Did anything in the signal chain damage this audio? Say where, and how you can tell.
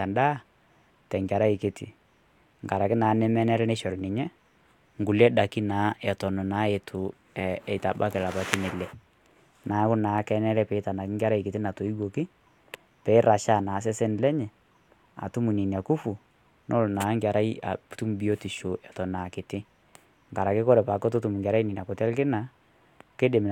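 No, nothing in this speech recording stood out as damage from any stage of the signal chain on listening.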